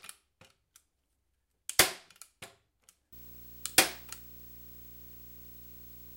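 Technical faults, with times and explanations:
3.12 to 6.16 s, video or display buzz: from 3.12 s to the end, a buzz at 59.94 Hz appears with a gritty hash riding above it, plus a thin, piercing whine at 15.7 kHz. The 59.94 Hz component is the picture's field rate and the 15.7 kHz tone is its line-scan rate, so a screen or video cable is coupling its scanning signals into the audio path. The interference sits roughly 20 dB below the sound.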